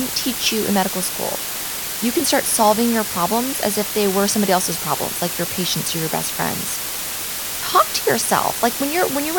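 From start to finish the speech sits under a steady, even hiss, the sign of low bit depth with dither: the signal keeps only about 4 bits, and dither added before rounding turns the error into white noise nearly as loud as the speech itself. Unlike undithered truncation, there is no gritty distortion tracking the voice.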